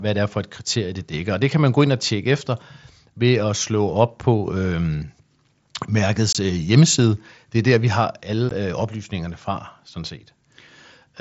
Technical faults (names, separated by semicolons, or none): unconcealed Bluetooth headset packet loss